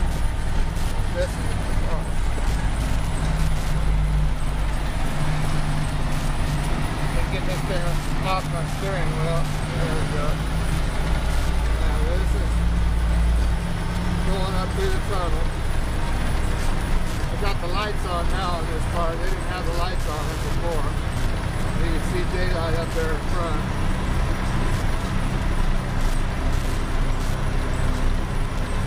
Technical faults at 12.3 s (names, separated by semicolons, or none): Wi-Fi interference